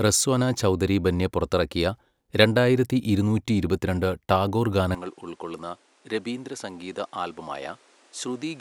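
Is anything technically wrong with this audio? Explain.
Yes. From 4.95 s to the end, just after "രണ്ടായിരത്തി ഇരുന്നൂറ്റി ഇരുപത്തിരണ്ട് ടാഗോർ", the speech abruptly turns duller and quieter, with no gap at the transition. The likely cause is an input switched to a poorer device in mid-recording. The new path passes nothing above 11.4 kHz, so the top end is missing. The level falls by about 10 dB, and a fresh background noise sits roughly 30 dB below the speech.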